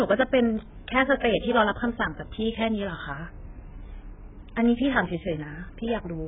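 AAC compression runs through the whole speech clip: nothing survives above 3.7 kHz, and the remaining band sounds heavily smeared and warbly. The likely cause is an AAC-LC encoder starved of bits, consistent with a rate near 8 kbps, discarding high bands and coarsely quantising the rest.

Pre-echo appears from 1.20 to 1.23 s, where a brief hiss leads into a sharp onset and blunts it. The codec spread quantisation noise meant for the loud attack across its whole block, smearing it about 32 ms earlier into the preceding quiet.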